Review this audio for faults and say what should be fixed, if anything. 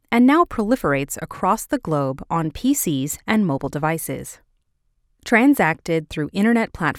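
No faults can be heard anywhere in the speech recording. Nothing here needs fixing.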